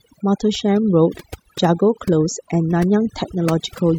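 Speech with overdone noise removal running throughout. The reduction is set so hard that frequency bands near the noise estimate are pulled down or gated off entirely, leaving a lowered background flecked with twinkling specks and the voice stripped of its quieter components.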